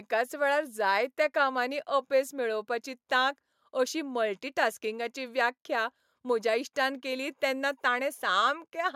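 No technical faults can be heard anywhere in the recording.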